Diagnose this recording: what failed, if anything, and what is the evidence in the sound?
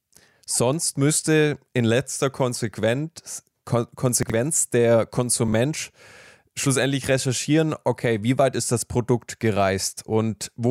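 Two brief jumbled moments break up the speech: one from 4.23 to 4.32 s, another from 5.48 to 5.53 s. This is chunks out of order at the driver or buffer stage. A block of audio was delivered late and played after the blocks meant to follow it, leaving hard joins. The shuffled segments work out to about 23 ms units, which fits 1024-sample buffers. The first event sounds displaced by roughly three blocks, the second by one.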